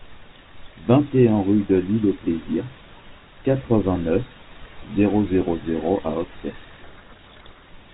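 From 6.84 to 7.69 s there is a codec payload misread. The G.726 decoder takes each code word with its bits in the wrong order. The speech sinks under harsh, gritty distortion. At 7.69 s the 32 kbit/s G.726 sound returns, band-limited below 4 kHz.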